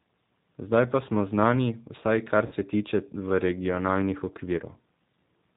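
Throughout the speech, the signal passes through the G.729 codec, which discards the waveform and rebuilds each 10 ms frame from a vocal tract filter, a pitch predictor and a handful of pulses, a sound that fits the 8 kbit/s G.729A variant. Nothing above 4 kHz survives, so the speech is band-limited and muffled, and the coarse pulse coding gives it a plainly audible rough, synthetic edge.

From 2.46 to 2.54 s, just before "se tiče v regionalnih", VoIP packets went missing and the speech codec concealed the loss by extrapolating from its last pitch and filter while steadily lowering the gain. The gap sounds like roughly 50 ms of lost audio. It is smeared into a fading tone or noise, and the speech stays weak or distorted as it resumes. A shorter loss follows from 4.58 to 4.61 s, after "se tiče v regionalnih", concealing about 20 ms as a brief blur.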